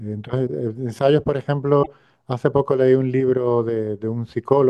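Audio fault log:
1.79–1.88 s, damaged data in a compressed stream: a short glitch of about 84 ms cuts into the speech, a chirp, squawk, click or brief hole instead of continuous sound. Bytes in that stretch of the compressed stream were corrupted, so the decoder either misread those frames into nonsense output or discarded them, lost its frame sync, and had to search forward for the next valid header before clean decoding resumed.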